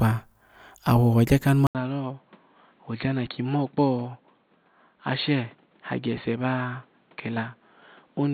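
At 1.67 s the speech cuts out for about 80 ms and returns duller and boxier, with nothing above 4.4 kHz, roughly 10 dB quieter, and a new background hiss well below it. This is most likely the input switched to a poorer device. A simple filter or codec bandwidth drop would only narrow the band, but here the gap, the level step and the different noise together mark a different microphone, and the change holds to the end.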